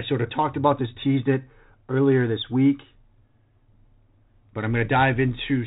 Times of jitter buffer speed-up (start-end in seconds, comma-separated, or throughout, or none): none